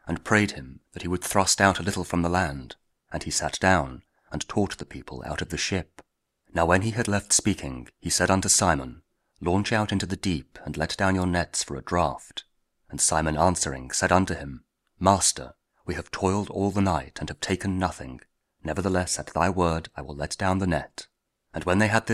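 Nothing stood out as a technical problem on listening to this audio.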